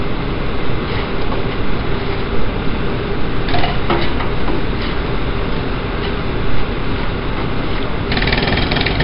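An everyday sound recording carries heavy 4-bit ADPCM compression throughout, leaving gritty hiss riding every loud moment and smeared attacks. Nothing sounds above 5.3 kHz, pointing to roughly 11 kHz sampling; a spectrogram shows a hard ceiling there and level-following noise filling the band.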